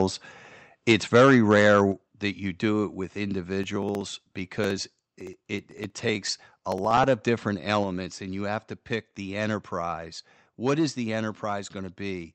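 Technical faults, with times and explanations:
0.89–1.79 s, microphone overload: peaks push about 5 dB past full scale just before "that you do it", so their tops get sheared into a harsh crackle, likely from input gain set too hot.
0.92 s, 1.92 s and 7.84 s, microphone volume stepped down: the level drops in sudden single steps of about 2, 6 and 4 dB, the last between "of different" and "and you have to", likely the call software turning the mic down.
3.64–7.04 s, periodic USB or driver dropouts: roughly 1 ms of audio goes missing every 0.063 s, about fifty times, leaving an even run of ticks where something keeps stalling the bus or driver.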